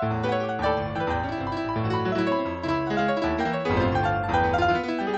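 Nothing in this one stands out as a technical problem; it's just the sound as it was captured, with nothing to flag anywhere along the way.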